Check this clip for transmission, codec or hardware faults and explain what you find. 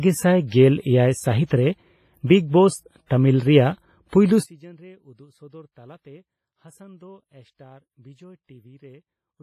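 Three faults are present: codec damage throughout, four pre-echoes, and a collapse in level over the latter part.

Throughout, the speech carries heavy transform-codec damage, likely from WMA compression at a low bitrate around 24 kbps. Long blocks smear quantisation noise across tens of milliseconds and drop weak spectral lines, so the speech rings and sounds washy, with hiss that swells and falls with it and nothing above 15.3 kHz.

At 0.47, 2.27, 3.06 and 4.09 s, the same codec causes pre-echo. Noise sized for a sudden attack late in a block spreads back over the quiet just before it, lasting 50, 28, 42 and 40 ms respectively. Each onset is preceded by a brief hiss and sounds smeared.

From 4.44 s to the end, the likely cause is one channel inverted before a mono fold-down. Whatever both channels shared cancels, background included, leaving only their small differences. The speech drops about 28 dB and survives as a faint residual copy.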